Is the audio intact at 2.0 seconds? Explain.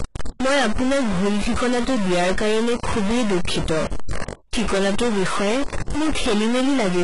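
No. At 2.0 s, like the whole clip, the speech carries a steady noisy distortion that continues into the pauses. That's likely a stuck bit, one data line held fixed so about half the samples sit off by that bit's weight. There's also heavy codec damage with nothing above 11 kHz. That sounds like HE-AAC compression at around 12 kbps, where the treble is rebuilt from copied lower bands, so s sounds come out gritty or metallic.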